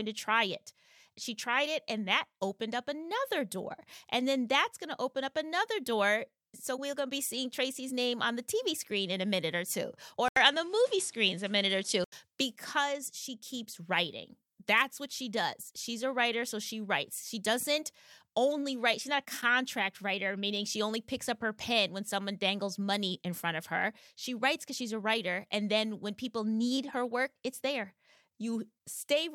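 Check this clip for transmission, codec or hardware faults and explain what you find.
One fault stands out. From 10.28 to 12.12 s the speech dulls after an 80 ms gap, likely an input switched to a poorer device. The spectrogram shows nothing above 11.4 kHz, a new noise floor roughly 30 dB down, and the waveform shifts in level by a few decibels.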